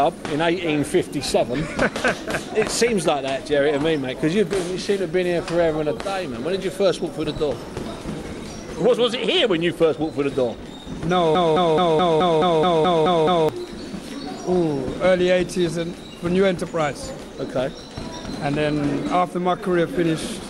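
At 11.35 s the sound locks into a broken-record loop: a fragment of about 214 ms plays ten times back to back until 13.49 s, each pass identical. Likely the player or stream stalled and kept resending the last chunk it held, so the material due in those two seconds never arrives. Unlike an echo, the copies don't decay or overlap, and unlike a dropout, there is no silence, just the same slice repeating at an even rhythm.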